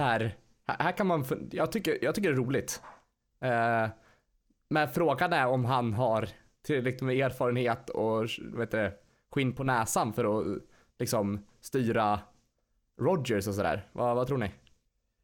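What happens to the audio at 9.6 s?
At 9.52 s the speech undergoes a sudden gain jump: the level falls by about 5 dB from one sample to the next and stays down until 9.66 s, just before "näsan för att liksom". The background noise drops by the same amount at the same instant, so the whole signal is scaled. The likely cause is a digital gain change or bit shift applied without any ramp, producing an abrupt step in loudness rather than a smooth fade.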